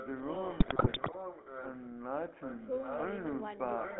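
Throughout, the GSM full-rate codec gives the speech a buzzy, gravelly roughness. Its band runs from 200 Hz to 3.6 kHz, which fits the 13 kbps full-rate codec.

From 0.0 to 1.89 s, an echo leak repeats the speech about 0.78 s later, only slightly quieter. The likely cause is a loudspeaker echo canceller letting sound through.

From 0.6 to 1.15 s, GSM bit errors break the speech into squawks, pops and gargling. Corrupted frame values bend the spectrum and jump the level. The damage points to 27 frames and roughly a 4 percent error rate.

From 2.4 to 3.23 s, the echo leak returns. The same copy follows 0.78 s behind, only slightly quieter than the speech.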